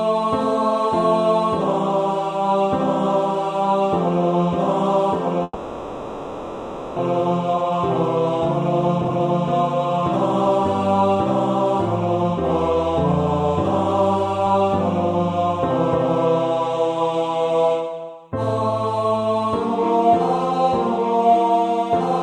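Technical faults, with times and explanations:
5.43 to 7.00 s, long network dropout: the audio stops arriving here, and the receiver papers over the gap by stretching the last sound into a buzzy, fading tail that runs for about 1.55 s before a brief 20 ms of near-silence. When the signal returns, about a second of material is simply gone. This is most likely a network outage rather than a capture problem, and the playback delay grows by about half a second as a result.
7.20 to 12.31 s, jitter buffer speed-up: once the delayed audio piles up in the buffer, the receiver works off the backlog by snipping out tiny pitch-period-sized slices over and over. Playback runs at about 109% speed with the pitch unchanged, so this stretch feels a bit rushed. By the end it has trimmed away roughly half a second, which pulls the latency back down after the dropout.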